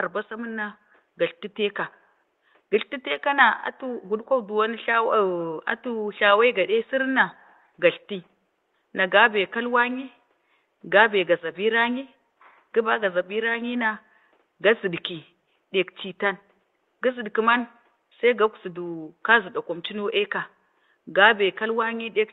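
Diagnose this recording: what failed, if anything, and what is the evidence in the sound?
Nothing failed in this recording.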